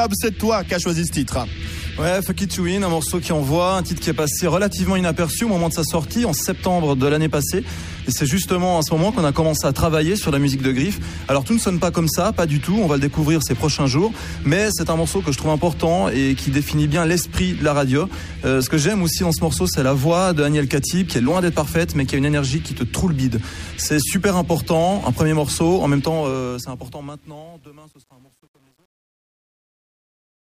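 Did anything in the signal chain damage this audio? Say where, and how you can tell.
Yes. Truncation distortion on the fade appears from 25.95 s to the end, worst from 26.93 to 30.58 s, as the fade-out that starts around 26 s decays into grit. A digital gain or sample-format stage dropped bits without dither, which fits roughly 9-bit resolution. The waveform shows stair-stepped squares, and the spectrogram shows broadband harmonic hash.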